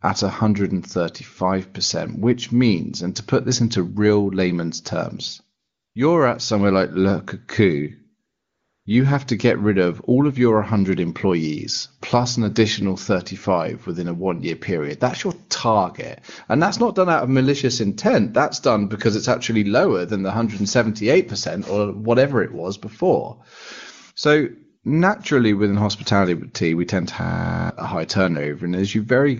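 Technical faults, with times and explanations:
5.59–5.95 s and 8.25–8.85 s, AMR comfort noise: after "into real layman's terms" and again just before "you have to get", the phone stopped sending speech frames for 0.36 s and 0.6 s, so the real room sound drops out and a smooth, steady synthetic hiss fills the gap, switching in and out.
27.21–27.70 s, system hang loop: right after "hospitality we tend to" the system froze and the hardware kept replaying one 23.22 ms chunk, 21 times over, giving a buzz at 43.1 Hz that fits a 1024-sample buffer. About half a second of audio is lost before "a high".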